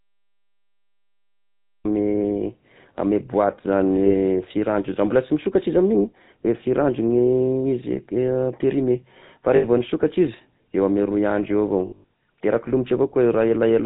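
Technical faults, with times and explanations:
Throughout, GSM full-rate codec: The speech has a plainly audible buzzy, gravelly roughness and no content above 4 kHz, which fits the 13 kbps GSM full-rate codec. This codec rebuilds the voice from a vocal-tract model driven by a sparse train of regular pulses, with only one excitation sample in three kept. The coarse excitation is what gives the grainy, rasping quality, and the hard 4 kHz ceiling dulls the high consonants.
0.00 to 1.85 s, cut-off start: The clip opens on digital silence, and the speech then begins abruptly at 1.85 s, already mid-sound. There is no natural attack or gentle rise into the first sound, so the onset lands as a hard edge. This happens when recording or streaming starts late and the capture picks up partway through an utterance rather than at a pause.
4.06 s, 9.56 to 9.65 s and 11.86 to 12.09 s, lost GSM frames: The first two losses last 40 ms and 80 ms. 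The third is 200 ms of missing audio spread over about 240 ms, with the longest unbroken gap around a tenth of a second. In each case the decoder repeats the last good frame's settings. The sound is smeared into a brief rough, metallic ring.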